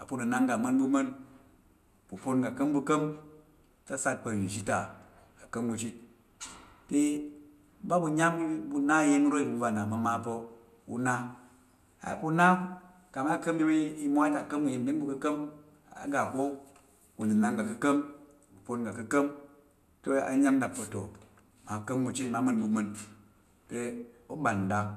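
No technical fault can be heard anywhere in this speech recording, so there is nothing to place in time or trace to a cause.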